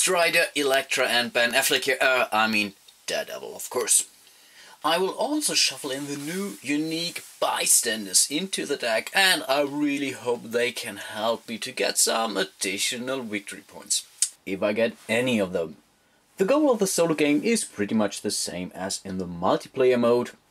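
From 0.0 to 14.36 s the audio has pre-emphasis left on: a J.17 treble boost was applied without its matching de-emphasis, lifting 10 kHz about 11 dB above 1 kHz. It sounds thin, bright and sibilant, a rising shelf-like tilt rather than a narrow resonant peak.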